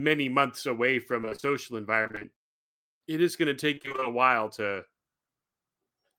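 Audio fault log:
1.21–1.52 s, 2.03–2.39 s and 3.75–4.07 s: repeated packet loss (robotic sound). Close-spaced gaps of up to about 26 ms are each patched by extending the last sound, covering nearly half of each stretch. That gives a choppy texture with pieces missing, not a stretched one.
4.13–4.74 s: jitter buffer slow-down. The receiver repeated short cycles to rebuild its reserve, adding 44 ms so the sound runs at 94% speed at unchanged pitch. It sounds drawn out rather than broken, and nothing is lost, unlike the robotic stretches just before.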